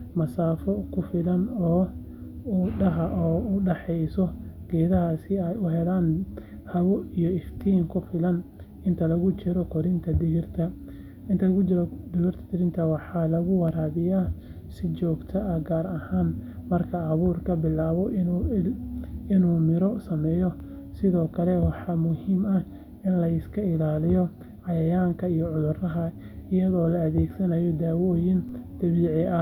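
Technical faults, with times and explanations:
28.49 s, DC step: the waveform's zero line suddenly jumps by about -41 dBFS, as happens when a converter recalibrates or an offset input is switched into the path. The step is not held. It drains away through a 5 Hz high-pass, so the offset fades within a few tens of milliseconds. That abrupt shift and its quick recovery come across as a single low thump or click near the end of the speech, while the speech itself carries on unchanged.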